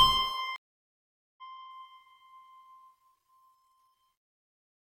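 At 0.56 s a stream reconnect drops the music into 815 ms of flat-line silence, a blank spectrogram gap, then it resumes near 1.42 s roughly half a second further on.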